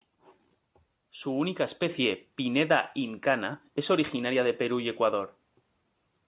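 At 1.89 s the microphone volume is stepped up. The call software judged the input too quiet and raised the device's input gain by about 4 dB in a single step, so the speech and the background noise both become louder together. On the waveform the envelope widens abruptly at that point, and the noise floor between syllables sits higher afterwards. On a spectrogram every band brightens at once, still ending at 4 kHz because of the narrowband call codec.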